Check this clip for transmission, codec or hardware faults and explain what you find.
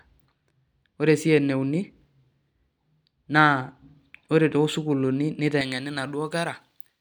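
One fault appears near the end. From 5.61 s to 7.01 s, pre-emphasis is left on: the treble lift applied for transmission never meets its matching de-emphasis, leaving about 11 dB more at 10 kHz than at 1 kHz. Speech turns thin, bright and sibilant. Unlike added hiss, the lift follows the speech itself.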